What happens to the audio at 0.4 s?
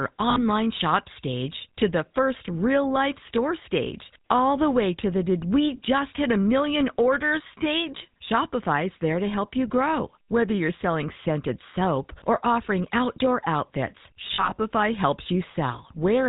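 At 0.4 s the sound turns into a brief rough, metallic ring from 0.3 to 0.43 s. This comes from lost GSM frames: about 60 ms of bad frames, which fits three 20 ms frames, were filled by repeating the last good frame's settings.

Underneath, the whole clip carries the buzzy, gravelly roughness of the GSM full-rate codec, with nothing above 4 kHz. This coder models the vocal tract and excites it with sparse regular pulses. The damage is plainly audible and fits the 13 kbps full-rate coder.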